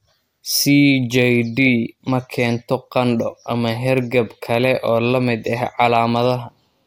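No technical faults can be heard in the speech.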